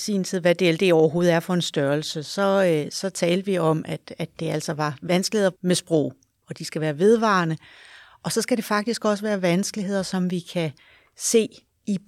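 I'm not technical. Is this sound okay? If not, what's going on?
Yes, it's fine: nothing in this recording sounds wrong, so there's nothing you need to worry about.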